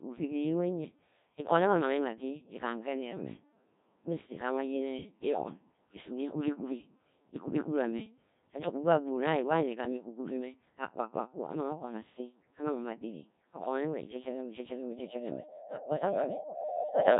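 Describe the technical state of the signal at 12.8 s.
Codec 2 vocoder damage runs throughout, including 12.8 s. Only pitch, voicing, energy and spectral envelope survive at roughly 1.3 kbit/s, so sine-wave resynthesis leaves the speech heavily robotic and buzzy.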